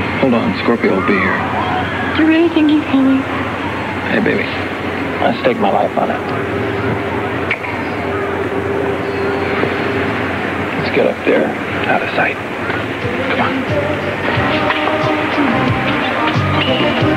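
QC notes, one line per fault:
No faults found. Nothing in the audio calls for a QC note.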